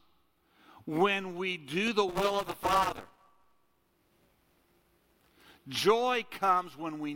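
After "when we do the", from 2.09 to 5.34 s, buffer tearing: writer and reader cross each period, splicing in stale audio and producing a 200 Hz robotic buzz.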